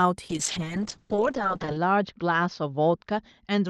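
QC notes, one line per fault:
0.3 to 3.7 s, call bitrate drop: speech turns rough and watery, its top narrowing from 12 kHz to 8 kHz, as the Opus encoder is starved of bits.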